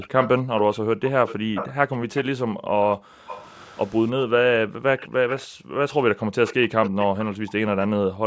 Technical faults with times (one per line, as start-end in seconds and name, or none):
0.00-2.24 echo leak
0.42-3.27 background gated by the echo canceller
3.27-3.88 echo leak
4.31-4.88 background gated by the echo canceller
4.98-5.47 echo leak
5.47-6.35 background gated by the echo canceller
6.46-7.53 echo leak
7.06-8.26 background gated by the echo canceller